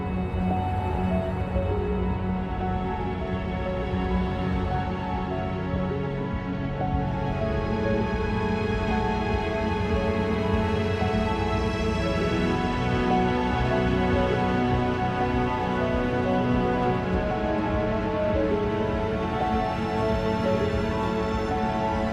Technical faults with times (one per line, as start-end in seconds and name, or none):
none